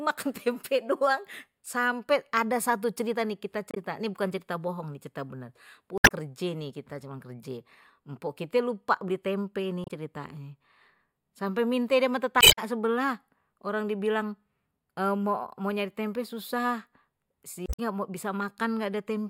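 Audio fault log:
3.71–3.77 s, 5.97–6.11 s, 9.84–9.90 s, 12.39–12.59 s, 17.63–17.80 s: damaged data in a compressed stream. Corrupted frames make the decoder lose sync and resync, giving brief glitches, the first right after "satu cerita nih kita".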